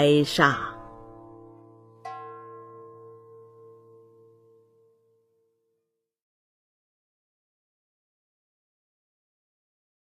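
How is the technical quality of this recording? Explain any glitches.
The one glitch is at the very start, a classic case of an adaptive stream starting at a low bitrate. From 0.0 to 2.0 s the sound is thin and dull, with the top end either gone or replaced by a fizzy, synthetic-sounding shimmer, and the codec artefacts are stronger. That character points to a low-rate HE-AAC version of around 20 kbit/s, which the player picks so playback can begin right away. Once it has measured the connection, it jumps to a better version, and at 2.0 s the quality snaps up with no gap. From there the sound resembles AAC-LC at about 96 kbit/s, with genuine treble reaching up to about 14.9 kHz.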